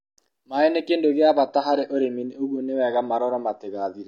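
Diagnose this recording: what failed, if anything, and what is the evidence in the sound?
The failure is at the network stage, surfacing in the codec: the adaptive stream switched to a lower bitrate at 1.36 s and stayed there to the end. The speech loses everything above 7 kHz without a gap, and codec artefacts rise. This fits a fall from about 96 to 24 kbit/s AAC after the connection slowed.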